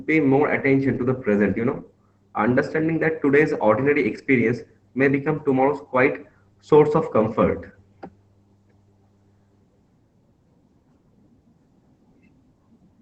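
From start to finish the speech carries Opus voice compression, with plainly audible damage. The top of the band is gone above 8 kHz, giving a wideband but muffled sound, and the coarsely coded excitation makes the voice hoarse and faintly robotic. That fits SILK mode at a low bitrate of around 12 kbps with 20 ms frames. A spectrogram would show a hard ceiling at 8 kHz and smeared, grainy harmonics below it.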